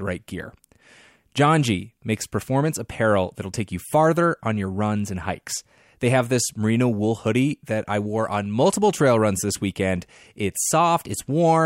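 Speech recording with no faults detected on listening.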